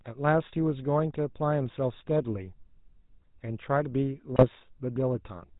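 Throughout, the speech passes through the GSM full-rate codec at a rate that fits 13 kbps. It models the voice with a pulse-driven vocal-tract filter and discards everything above 4 kHz, leaving a plainly audible buzzy, gravelly roughness. From 4.32 to 4.46 s, GSM bit errors corrupt the decoder's filter, pitch and gain values across a few frames, bending the spectrum into a brief burst of squawks, pops and gargling.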